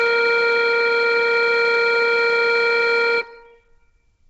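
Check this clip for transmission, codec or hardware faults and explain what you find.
One codec fault runs through the whole music clip. The damage is heavy and fits Bluetooth LC3 compression, likely from a low-bitrate link near 16 kbps with 10 ms frames. Nothing remains above 7.8 kHz. Upper spectrum is noise-filled, giving a grainy, breathy edge.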